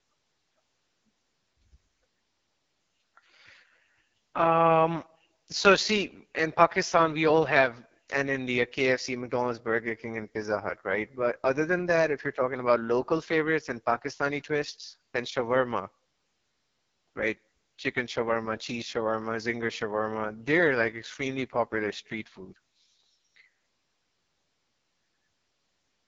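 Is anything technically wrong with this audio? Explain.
Yes. Heavy AMR wideband (HD Voice) codec damage runs through the whole clip. The codec rebuilds speech from pulses driving a vocal tract model and fills the top band with shaped noise. Here the speech sounds rough and raspy, which fits its lowest 6.6 kbit/s mode. Nothing is heard above 7.5 kHz.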